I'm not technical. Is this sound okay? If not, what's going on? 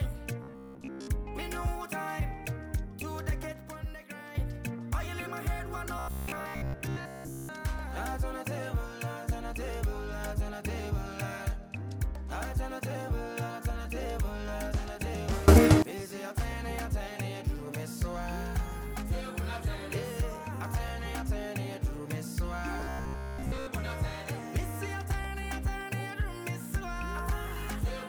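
No, there are two kinds of problem here.

First, robotic sound from repeated short buffers, at 0.44 to 1.08 s, 5.99 to 7.49 s and 22.80 to 23.67 s. The sound turns into a hard, metallic buzz. It is a low hum, about 67 times a second. Most of the real audio in those stretches is missing. The likely cause is that new audio arrived too slowly. The player kept repeating the last tiny piece, about 15 ms long, to fill the gap.

Second, sudden gain jump, twice. At 3.52 s the level drops and stays noticeably quieter until 4.35 s. At 15.48 s it leaps much louder until 15.82 s. Both changes happen instantly, with no fade. The background noise jumps along with the sound, so the whole recording shifts at once. The likely cause is a volume setting being changed abruptly inside the software.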